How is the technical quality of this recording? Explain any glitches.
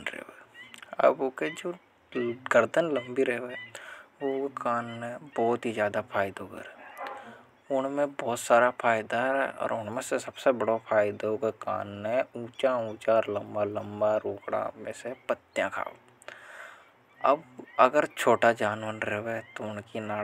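Nothing in the recording stood out as a technical problem on listening, so there are no glitches to explain.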